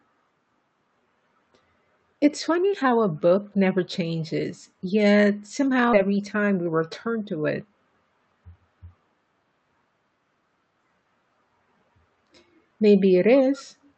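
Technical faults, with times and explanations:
5.93–5.95 s, skip ahead: roughly 0.7 s of speech is dropped and the two sides are spliced almost directly, so playback jumps forward with no audible gap.
6.05–7.84 s, jitter buffer speed-up: about 150 ms of short pitch-period pieces is cut out to drain excess buffered audio, so speech runs about 9% faster at unchanged pitch.
13.83–13.90 s, echo leak: a faint delayed copy of the speech arrives 199 ms later, about 40 dB down, likely residue the far-end echo canceller failed to remove.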